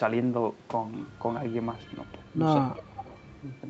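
Echo leak at 1.31 s, 1.72–2.38 s and 2.74–3.61 s: a faint copy trails about 0.34 s behind, louder in the last stretch. It is likely residue an echo canceller missed. A spectrogram shows the speech pattern repeated, shifted later.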